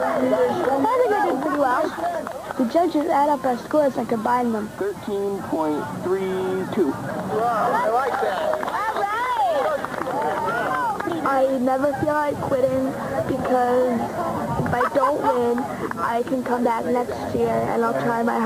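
No technical faults can be heard anywhere in the recording.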